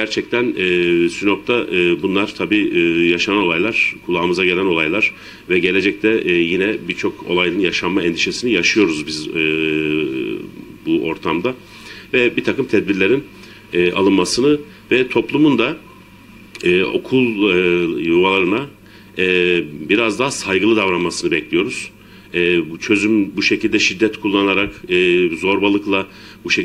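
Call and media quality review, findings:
No capture, transport or playback faults found anywhere in the signal.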